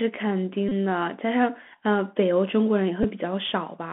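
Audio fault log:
Throughout: Bluetooth CVSD headset codec. The speech is confined to a narrow phone band of roughly 200 Hz to 3.4 kHz. The one-bit delta coding at 64 kbps cannot track fast loud changes. Sibilants turn scratchy and a grainy hiss sits under everything.
0.69 to 0.71 s: Bluetooth headset packet repeated. Packets are lost for about 26 ms, fitting a run of about seven lost packets. The headset replays the last good packet each 3.75 ms slot. This gives a brief buzz near 267 Hz.
3.03 s: Bluetooth headset packet repeated. A shorter gap of about 11 ms, fitting about three lost packets, is patched by repeating the previous packet. The run of repeats gives a brief buzz near 267 Hz.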